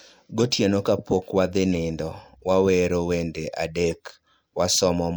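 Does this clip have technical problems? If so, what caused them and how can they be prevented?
Yes. Compressed frames skipped at 0.38 to 0.44 s: the speech jumps ahead by roughly 30 ms. Prevent it by checking file integrity after transfer and re-encoding from an undamaged source.

Corrupt frame decoded at 1.74 s and from 3.88 to 3.95 s: flipped bits across a few frames misplace energy in frequency, giving a quieter error first, then a louder one. Prevent it with error-checked storage and transmission so damaged frames are detected and concealed, not played.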